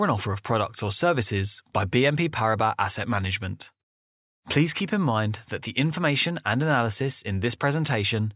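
Nothing in this speech recording stands out as a technical fault.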